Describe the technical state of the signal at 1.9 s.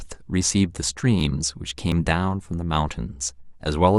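A tiny skip in the speech, at 1.92 s. It comes from an overlap between stream segments: two segments' time stamps overlap, and the player discards the overlapping span even though that sound was never duplicated. About 12 milliseconds go missing, and the waveform jumps across the gap.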